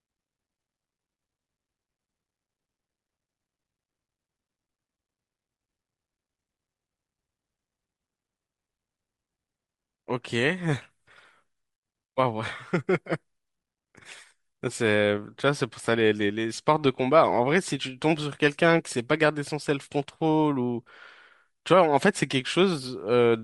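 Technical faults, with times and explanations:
Throughout: Bluetooth LC3 compression. Likely a low-bitrate LC3 link, fitting 48 kbps with 7.5 ms frames, discarded upper-band detail and filled it with noise, leaving the speech with a breathy, grainy edge.
22.31 to 22.33 s: lost LE Audio frames. About two frames, 15 ms of audio, went missing, and the decoder refilled them from the previous spectrum with scrambled signs, leaving a brief noisy smear.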